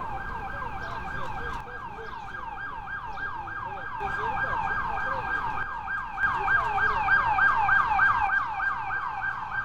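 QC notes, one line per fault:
1.61–4.01 s, 5.63–6.23 s and 8.27–9.64 s (to the end): one channel drops out. The sound abruptly falls by about 6 dB and, except in the last run, returns just as suddenly. This is likely one stereo channel going silent, so the mono sum keeps only half the shared signal and loses anything unique to that side.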